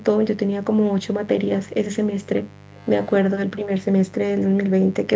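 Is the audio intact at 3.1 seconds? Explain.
No. A 50 Hz mains buzz runs throughout, about 20 dB below the speech: a steady, raspy tone from switching spikes whose harmonics extend well upward. From 2.72 to 3.12 s a faint copy of the speech trails 268 ms behind, likely an echo leak where a far-end loudspeaker's echo canceller let some audio back through.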